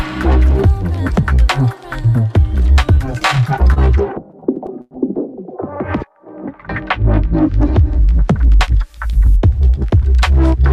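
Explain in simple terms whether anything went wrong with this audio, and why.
Two things went wrong, both caused by the audio arriving unevenly over a network.

Between 2.95 and 4.93 s there are repeated stalls, a stutter. The data kept showing up late, so the player ran out of sound 13 times in under two seconds. Each time it stretched the last bit of sound to cover the wait, with the longest hold lasting 97 ms. Unlike a dropout, nothing is lost. The audio just hesitates and drags, adding up to about a quarter of a second of filler.

From 8.26 to 9.98 s there is a jitter buffer speed-up. The receiver had built up more stored audio than it wanted, so it trimmed many tiny slivers to catch up, removing about a tenth of a second in total. The sound runs about 6% faster and feels slightly rushed. Unlike a tape or file simply played too fast, the pitch stays the same, because only time is cut, not the sound itself stretched.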